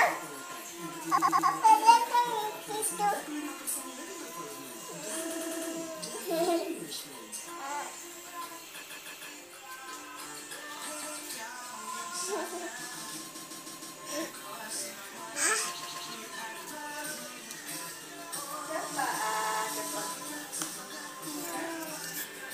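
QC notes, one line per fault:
1.17–1.48 s, 5.29–5.71 s, 8.82–9.29 s, 11.01–11.17 s, 13.34–13.97 s, 15.82–16.08 s, 19.32–19.63 s: repeated frames. A short block of compressed audio plays again, one to four extra times. The blocks last 104.5, 130.6 or 156.7 ms, which fits runs of four to six frames. Each repeat is heard as a stutter. Every event makes the audio longer, by up to 0.63 s.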